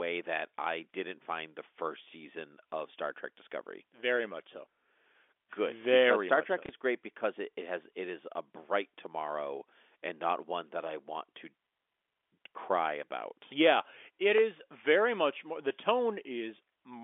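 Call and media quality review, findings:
Packet loss with last packet repeated, 6.66–6.69 s, before "is great because it": one 30 ms packet replayed in the G.711 telephone-band audio; small blip instead of a silent gap.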